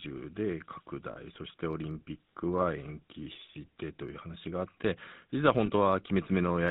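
Throughout, the speech carries the buzzy, gravelly roughness of the GSM full-rate codec, which fits 13 kbps. Its pulse-driven vocal-tract model leaves nothing above 4 kHz. Lost GSM frames at 1.12–1.17 s and 5.66–5.70 s, about 40 ms and 20 ms, were covered by repeating the last good frame, giving a brief metallic ring.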